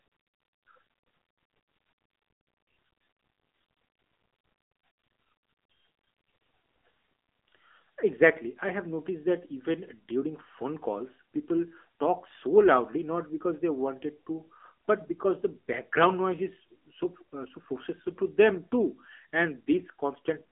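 An AMR narrowband mobile codec runs throughout at 7.4 kbps, band-limited to roughly 250 Hz–3.5 kHz. Its sparse pulse-driven vocal-tract model leaves speech plainly buzzy and synthetic, with nothing above 3.8 kHz.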